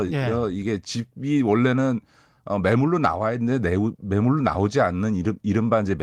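No technical faults are audible.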